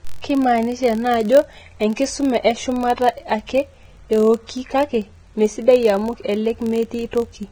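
Speech throughout, with grainy, hissy treble where fine detail has turned to noise, likely Vorbis compression at a low bitrate, unlike plain low-pass filtering, which stays clean. A steady 43.1 Hz buzz tracks the speech level, fitting a filter restarted on every block of 1024 samples; hum would persist through pauses.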